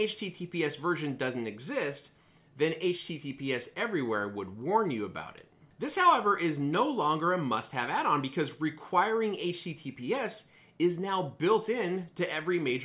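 No technical faults can be heard anywhere in the audio. Nothing interrupts or alters the sound at any point.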